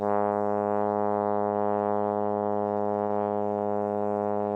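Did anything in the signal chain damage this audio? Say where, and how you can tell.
Yes. From 1.19 to 3.16 s the music suffers repeated stalls (stutter), a network and jitter-buffer fault. Packets arrived late, the buffer ran dry about 50 times, and the receiver bridged each gap by extending the last sound, with the longest hold around 29 ms. Those fills total 620 ms, roughly 31% of that stretch, yet nothing is skipped. That is what separates it from packet loss: the music drags and judders rather than jumping ahead.

From 3.79 s to the end there is a jitter buffer slow-down, again at the receive buffer. To rebuild its reserve, the receiver repeated single pitch periods over and over, adding 136 ms and playing the passage at 84% speed. The pitch holds steady, which rules out a clock or tape-speed error, where slowing would also drop the pitch. Unlike the earlier stutter, the passage here is stretched out, with sustained tones drawn out.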